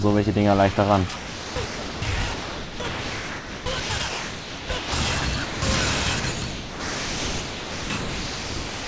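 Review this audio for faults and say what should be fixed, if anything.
The sound is chopped by the voice detector in four stretches: 1.16 to 2.02 s, 2.34 to 4.92 s, 5.20 to 5.62 s, and 6.20 s to the end. Parts of the sound drop out, about 0.76 s, 2.12 s, 0.2 s and 2.44 s of it, and a synthetic hiss fills the gaps. The likely cause is the sender's voice detector gating too aggressively and substituting comfort noise. The G.722 call path itself passes nothing above 8 kHz. To prevent this, lower the detector's threshold and lengthen its hangover time.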